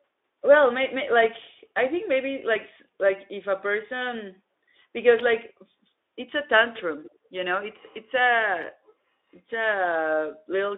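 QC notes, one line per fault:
7.03 to 7.18 s, echo leak: a faint delayed copy of the speech, about 20 dB down and trailing by 150 ms, surfaces briefly. The far end's echo canceller likely let some loudspeaker pickup through, returning a short scrap. The narrow, lightly coded telephone band carries it.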